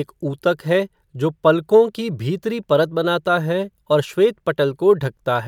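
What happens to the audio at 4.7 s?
Nothing goes wrong at 4.7 s; the speech carries on intact through that moment.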